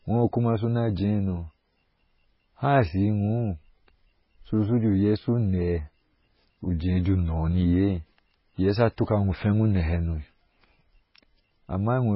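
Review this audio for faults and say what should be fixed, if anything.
Heavy MP3 compression, likely at a very low bitrate in the region of 16 kbps, runs through the whole speech clip. Starved of bits, the encoder has discarded everything above 5.6 kHz and is zeroing weak frequency lines that flicker on and off from frame to frame. The result is dull, band-limited speech with a watery, swirling texture, metallic chirps on s sounds, and smeared consonant attacks. To prevent it, keep an uncompressed or high-bitrate master and encode only once, at a bitrate well above this.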